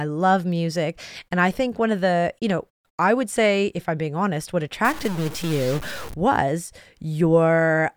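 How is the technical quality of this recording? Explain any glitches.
The recording has one clear glitch. From 4.85 to 6.14 s the speech turns harsh and buzzy, consistent with a stuck bit. The likely cause is a single data bit held at a fixed value by a faulty line or converter. About half the samples then shift by a step of about -30 dBFS, in a pattern that follows the waveform. Because small values flip this bit as they change sign, pauses in that span fill with noise. On a waveform the trace looks jagged and offset. A spectrogram shows a broadband smear across the whole band for that stretch.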